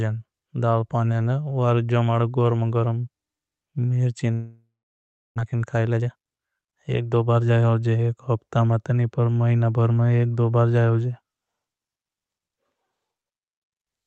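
Speech carried over an Opus call path with 8 kHz audio bandwidth breaks off at 4.33 s in what is likely a long network dropout. The last sound trails into a fading buzz or hiss, then about 0.68 s of silence follows until 5.40 s, and roughly 0.6 s of the talk never returns. The length of the silence sets it apart from a brief concealed packet loss. From 5.41 s to 7.65 s a jitter buffer speed-up plays the speech at about 119% of normal pace, with the pitch unchanged, as the receiver trims roughly 0.4 s of built-up delay. Because the pitch stays the same, this is not a sample-rate error.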